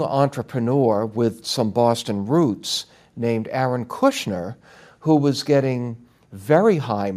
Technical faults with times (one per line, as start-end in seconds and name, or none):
none